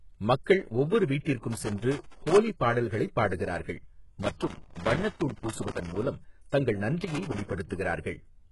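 Throughout, the speech has heavy codec damage with nothing above 11.5 kHz. This is likely HE-AAC compression at a low bitrate, near 12 kbps, with treble rebuilt by copying lower bands upward.

Loose connector crackle bursts in from 1.52 to 2.37 s, just before "பாடல்களைப் பாடுகிறார்கள்", again from 4.22 to 6.02 s after it, and from 7.02 to 7.53 s. An unsteady contact chops the signal into irregular scratching.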